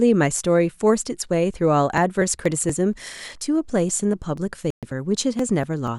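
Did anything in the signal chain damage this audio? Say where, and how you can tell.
Yes. From 1.98 s to 5.88 s a regular tick recurs every 0.24 s, around fifteen times, each marking roughly 10 ms of skipped audio. These are periodic USB or driver dropouts at the driver or buffer stage, where a task blocks the bus on a fixed cycle.

At 4.70 s the sound cuts to 123 ms of silence, then picks up at 4.83 s. A gap that long with a clean restart points to playback, most likely a Bluetooth stall. Interference delayed packets, the headphone buffer emptied, and output paused until resent data arrived.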